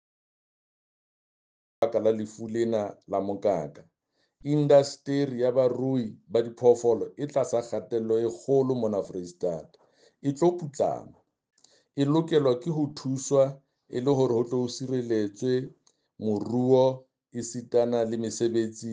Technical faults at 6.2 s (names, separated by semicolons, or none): none